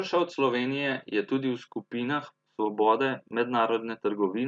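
No technical faults can be heard anywhere in the speech; the signal stays intact and continuous throughout.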